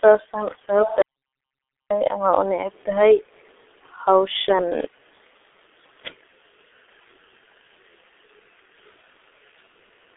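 Speech, heavily damaged by the G.723.1 codec throughout. Nothing passes above 3.8 kHz, so it sounds muffled. Slow frame updates blur consonants and roughen the voice, consistent with roughly 6.3 kbit/s.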